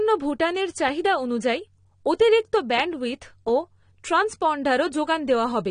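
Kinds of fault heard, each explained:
AAC compression: the speech is dull and smeared throughout, with a plainly audible warbling, fizzy texture on sibilants and held sounds, likely from AAC-LC at around 32 kbps. Unlike a plain low-pass filter, the artefacts shift from frame to frame rather than simply removing treble.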